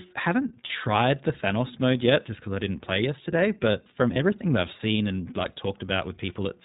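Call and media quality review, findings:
iLBC codec throughout, plainly audible: narrowband, slightly rough, synthetic-edged speech. Spectrogram shows a hard ceiling at 4 kHz with nothing above it. Each frame's excitation is coded independently, and the texture points to the 20 ms mode at about 15.2 kbps.

Lost iLBC frames at 0.66–0.71 s (40 ms, two frames) and 4.14–4.17 s (20 ms, one frame). Each gap sounds like a briefly held, faintly buzzy vowel, because the decoder repeats the last pitch cycle mixed with noise. Waveform shows similar repeating periods; spectrogram shows frozen horizontal harmonic stripes. Clean recovery immediately afterward.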